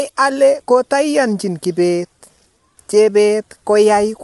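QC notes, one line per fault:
Throughout, low-delay AAC compression: the speech sounds rough and grainy, with a hiss that fills in between the harmonics and a top end that stops dead, with nothing above about 11.6 kHz. This is likely AAC-ELD at a low rate, around 32 kbps, whose coarse quantization at that bitrate leaves noise between the voice harmonics. On a spectrogram the harmonic stripes look smeared and speckled with noise, and everything cuts off sharply at a flat ceiling near 11.6 kHz.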